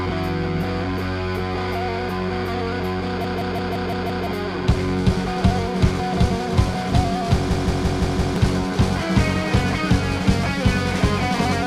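A machine-gun stutter interrupts the sound twice, from 3.24 to 4.27 s and from 7.51 to 8.36 s. A 0.17 s fragment repeats at about 5.9 Hz, roughly a second lost each time. This system hang loop, a frozen driver replaying an 8192-sample ring buffer, explains it.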